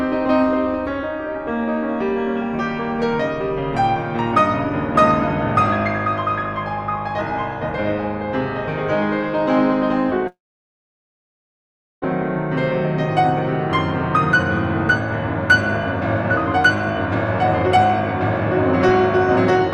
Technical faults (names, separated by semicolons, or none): long network dropout